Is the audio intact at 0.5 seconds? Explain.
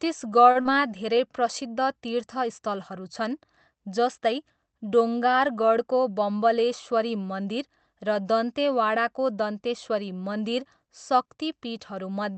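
No. From 0.51 to 0.57 s there is a short stall from a late packet. A packet arrived late, the jitter buffer ran dry, and the receiver stretched the last bit of sound by about 36 ms until the packet turned up, then carried on from the same point. You hear a sound held slightly too long, with a faint buzz or dip. Unlike a packet-loss dropout, nothing is skipped, so the speech resumes without any gap.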